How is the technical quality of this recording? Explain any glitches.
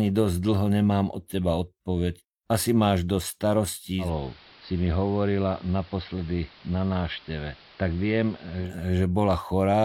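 The recording has one clear fault. From 3.98 to 8.74 s, digital radio blending to analogue occurs: the receiver lost its digital signal and cross-faded over 160 ms to the station's AM broadcast, then back. The speech turns dull, drops about 3 dB and gains hiss roughly 25 dB down.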